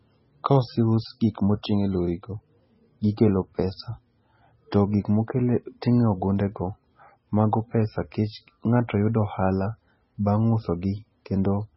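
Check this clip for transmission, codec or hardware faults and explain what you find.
One fault runs through the whole speech recording: MP3 compression artefacts, likely from MP3 encoding at a very low bitrate, around 16 kbps. Nothing sounds above 5.6 kHz, and heavy coding damage switches weak frequency lines on and off between frames, giving a watery, swirly sound with smeared consonant attacks. A spectrogram shows a flat ceiling at 5.6 kHz and patchy, flickering energy below it.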